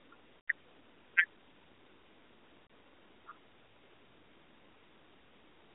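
Lost AMR speech frames at 0.43–0.49 s and 2.66–2.70 s: the decoder fills the gaps, so speech briefly smears and dips, the 80 ms first loss the longer.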